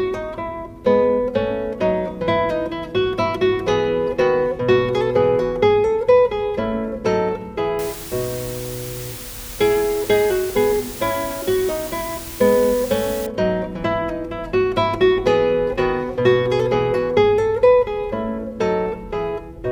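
From 7.79 to 13.26 s there's low bit depth with dither: the signal's been requantised coarsely, which fits about 6 bits, so it comes out as a fairly loud, steady, even hiss.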